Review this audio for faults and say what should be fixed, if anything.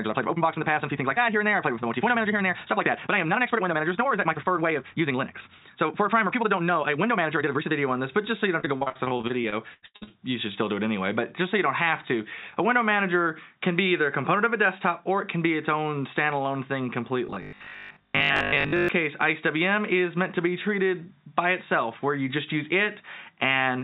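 Time-stretched section, 0.00 to 7.72 s: the audio runs about 1.8 times too fast while its pitch stays put, so it sounds rushed. This likely comes from software squeezing the passage to fit a length by dropping short slices. Avoid automatic length-fitting, or cap the stretch ratio well below this.

Repeated packet loss (robotic sound), 8.60 to 10.12 s: a rapid run of short dropouts, the longest about 84 ms. Each is patched by extending the previous sound, so roughly a third of the stretch is filled-in material with a choppy quality. Improve network stability or enlarge the jitter buffer so late packets still arrive in time.

Robotic sound from repeated short buffers, 17.27 to 18.89 s: a rigid metallic buzz at 50 Hz replaces most of the real audio. It likely comes from one 20 ms block being replayed while fresh audio is skipped, which imposes that fixed pitch. Keep the audio feed delivering on schedule so the buffer never runs dry.

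The bandwidth, with nothing above 4 kHz, fits the G.711 call codec on this path.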